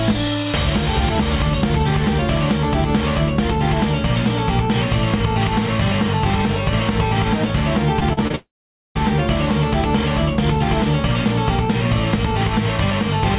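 From 8.0 to 8.35 s, repeated packet loss leaves four short gaps patched by stretching prior audio, giving a choppy, robotic texture with pieces missing. From 8.35 to 8.97 s, a long network dropout is the likely cause: a brief fading buzz or hiss is followed by about 0.48 s of silence before the sound resumes, with that stretch lost. The whole clip stays band-limited to 4 kHz, which fits a 64 kbps G.711 A-law call path.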